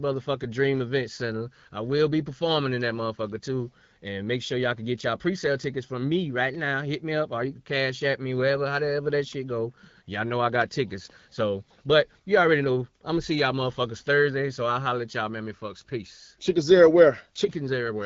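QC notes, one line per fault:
No faults found.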